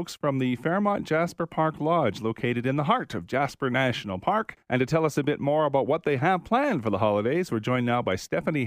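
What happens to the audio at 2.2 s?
At 2.2 s the audio runs on intact, with no dropout, click, distortion or other fault at that moment.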